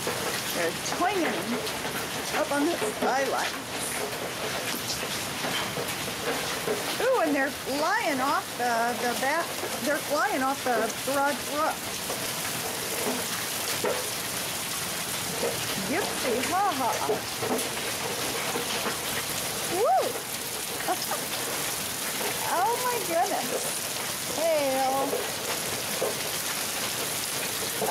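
No technical faults are audible anywhere in the recording.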